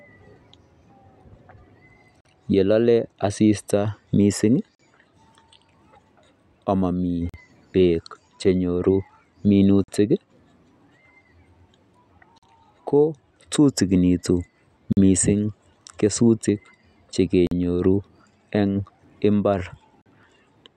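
The speech drops out abruptly eight times, in brief silent holes with hard edges, each about 44 ms long, beginning at 2.21, 4.75, 7.29, 9.84, 12.38, 14.93, 17.47 and 20.01 s. The regular spacing of about 2.5 s marks this as a gap between chunks: the audio was delivered in 2.5-second blocks, and silence was inserted at each join. No speech is lost, but the flow stutters at every boundary.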